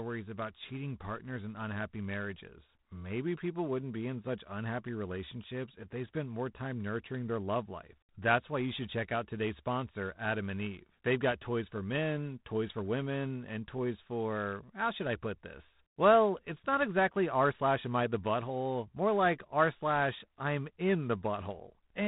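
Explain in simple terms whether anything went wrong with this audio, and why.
Something did go wrong, from the first second to the last. The speech has been through G.726 ADPCM, a telephone coding method that saves space by storing only rough guesses at how each moment differs from the one before. Squeezed this hard, those guesses leave a plainly audible rasping hiss that rises and falls with the speech itself, unlike ordinary background hiss, which stays steady through pauses. Everything above 3.9 kHz is also missing, giving a narrow phone-line sound.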